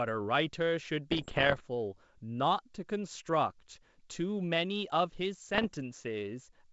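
From 1.11 to 1.65 s, the speech breaks into pops and rough, crackly bursts. These are bit errors on an ADPCM link, at roughly one bit in a hundred. Each flipped bit throws off the decoder's step size and prediction. The damage rings on briefly, and the level jumps about. A shorter, milder burst follows from 5.54 to 5.70 s. Between them, the wideband G.722 sound stays clear with a faint upper hiss.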